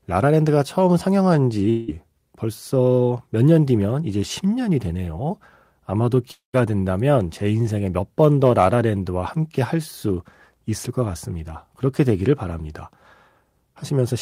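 A likely long network dropout cut speech at 1.69–1.90 s and 6.32–6.55 s. Each gap is bridged by a fading buzz or hiss, and the second trails into brief silence before speech resumes.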